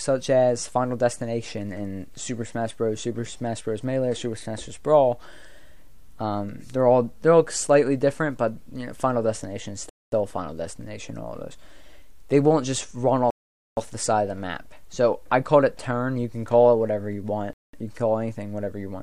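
At 9.89, 13.30 and 17.53 s the sound drops to silence for 0.23, 0.47 and 0.20 s. These are likely Bluetooth stalls: the headphone buffer ran dry awaiting resent packets.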